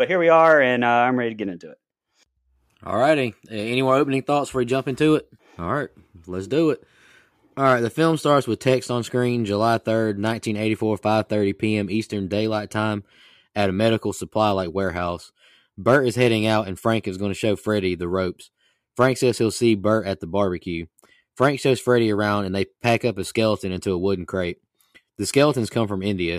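No technical faults can be heard anywhere in this speech recording; the signal stays steady and intact throughout.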